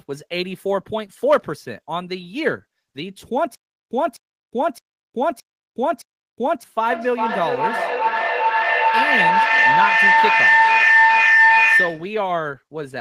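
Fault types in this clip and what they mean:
Stutter with silent gaps: from 3.55 to 6.63 s the speech stalls, and a 255 ms fragment repeats five times with 363 ms of digital silence after each, a steady 617 ms cycle. The likely cause is playback retrying the last buffered piece, and the new audio for that stretch is lost.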